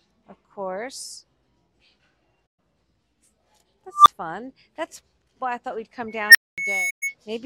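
AAC frame loss with muting appears first at 2.47 to 2.59 s. A run of compressed frames went missing, which fits about six frames or 128 ms of audio, and the decoder replaced their spectrum with zeros. Because successive frames overlap, the sound fades out and back in rather than stopping dead, leaving a soft-edged hole.

An unstable filter follows at 3.93 to 4.08 s. A recursive filter received coefficients that made its feedback exceed unity, so its output grew on every pass. A tone around 1 kHz swells over 126 ms into a loud, clipped beep. The arithmetic then overflows and the output drops out for 20 ms before the filter resets.

Loudspeaker feedback squeal runs from 6.08 to 7.15 s. A microphone is hearing its own loudspeaker, and at 2.2 kHz the loop gain exceeds one, so that single tone reinforces itself on each trip around the loop. It rises over most of a second into a steady squeal that peaks at about 5 dB above the sound.

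Within that squeal, a second unstable filter runs from 6.29 to 6.58 s. A tone near 2 kHz climbs in 56 ms to an overloaded shriek, and the output then falls silent for 230 ms.

A second AAC frame loss with muting follows at 6.90 to 7.03 s. It is again a faded gap of 128 ms, consistent with six dropped frames.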